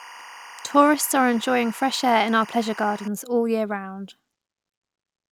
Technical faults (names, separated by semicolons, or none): timecode bleed